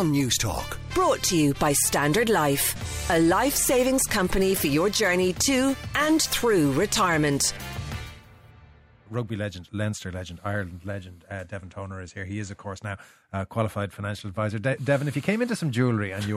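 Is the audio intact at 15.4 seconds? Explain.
Yes, the audio at 15.4 seconds is intact, with no dropout, click, distortion or other fault at that moment.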